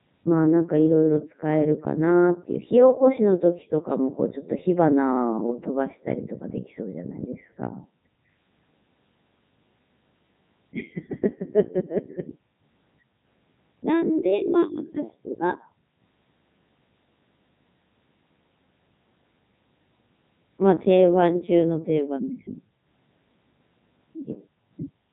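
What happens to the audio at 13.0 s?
At 13.0 s the speech is going through the Codec 2 vocoder, as it does for the whole clip. Rather than preserving the waveform, the decoder rebuilds the voice from sine waves driven only by transmitted pitch, voicing, energy and a coarse spectral envelope. The result is heavily damaged, robotic, buzzy speech with a synthetic edge. The level of degradation fits Codec 2's top 3.2 kbit/s mode.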